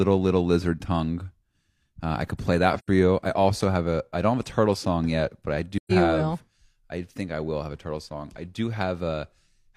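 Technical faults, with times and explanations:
2.79–2.88 s and 5.77–5.92 s, AAC frame loss with muting: compressed frames were lost and the decoder zeroed their spectrum, so the audio fades out and back in through the overlapping windows. This leaves soft-edged gaps of about 85 ms after "I could play", before "you I also have", and about 128 ms after "song yet but I". These lengths fit two and three lost frames.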